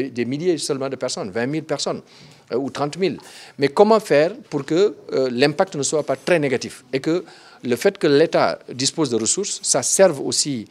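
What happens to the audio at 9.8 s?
Nothing goes wrong at 9.8 s; the audio plays through that moment intact, with no dropout, click or distortion.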